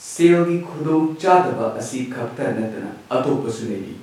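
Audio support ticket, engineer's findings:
Speech signal checked with no technical faults found; level, continuity and timing hold steady throughout the recording.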